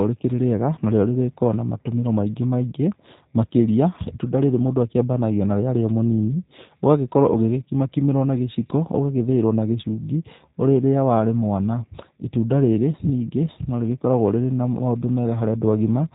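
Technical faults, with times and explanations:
Throughout, G.729 codec: speech sounds rough and synthetic, nothing above 4 kHz, the narrow model-based rebuild at about 8 kbit/s, unlike plain lowpass muffling.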